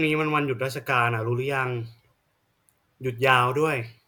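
No technical faults are audible.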